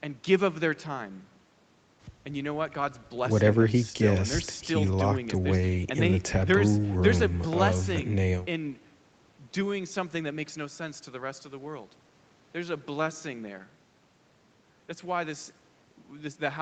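Nothing technically wrong can be heard in this speech recording. What is audible of the call path is normal: the sound stops at 8 kHz, as the Opus codec and the microphone processing pass nothing higher, and the lowest bass is trimmed by the usual high-pass filter.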